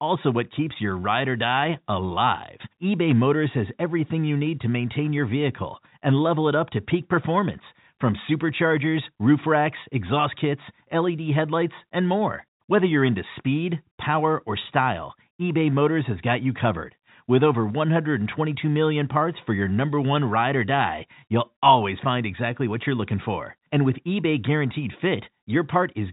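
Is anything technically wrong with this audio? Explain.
No, nothing is technically wrong with this speech clip; it carries the narrow band of G.711 telephone coding, with nothing above 4 kHz, as that format always does, which fits a 64 kbps mu-law line, and no faults can be heard.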